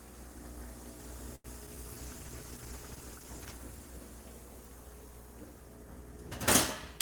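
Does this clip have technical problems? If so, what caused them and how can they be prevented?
Yes, three separate network faults affect this clip.

At 1.35 to 1.46 s there is a short stall from a late packet. A packet arrived late, the jitter buffer ran dry, and the receiver held the last sound for about 90 ms until it came. It then resumed from exactly where it left off, so nothing is skipped. The result is one sound drawn out too long with a faint buzz or dip, and everything after it runs about 90 ms later. That is what separates it from a loss. Prevention: give the jitter buffer a little more headroom, or let it adapt faster when delay starts to climb.

At 1.66 to 1.69 s there is a short concealed packet loss. About 20 ms of audio never reached the decoder, and only a very brief synthesized continuation bridges the gap before real audio blends back in. You hear a brief smear or wobble, and a sliver of the sound is genuinely gone. 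Unlike the stall, this is a skip rather than a stretch. The timing also tightens slightly here instead of falling further behind. Prevention: turn on in-band forward error correction or redundancy so a lost packet can be rebuilt.

From 1.98 to 3.61 s there is a call bitrate drop. The bandwidth estimate fell and the encoder went from 32 kbps to 14 kbps, staying at the lowest rate for about 1.56 s. At that rate the coding turns coarse and the top end is trimmed, so the sound becomes rough, watery or muffled. It then clears as the rate climbs back. It differs from the two glitches above because it is a sustained change in texture, not a momentary blip. Prevention: keep the connection from becoming congested, for example by limiting competing uploads on the same link.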